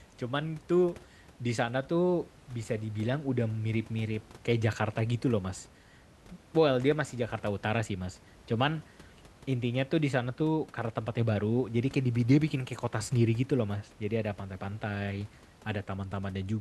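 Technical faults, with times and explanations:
No technical faults can be heard in this speech clip. A low room noise sits in the background, about 25 dB below the speech, and it belongs to the recording space rather than the system.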